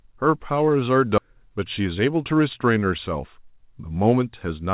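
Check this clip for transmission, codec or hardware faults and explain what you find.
Two transmission faults are audible in this speech, heard through a band that stops at 4 kHz, which fits a narrowband G.711 A-law call path.

Skip ahead, 1.18 to 1.20 s: about 0.7 s of audio was dropped. Speech jumps straight forward, joined with no gap, so a chunk of the utterance is simply missing.

Jitter buffer speed-up, 1.28 to 2.40 s: to shed excess delay, the receiver cut short pitch-period pieces, roughly 100 ms in total. Speech runs at 108% speed, sounding hurried but unchanged in pitch.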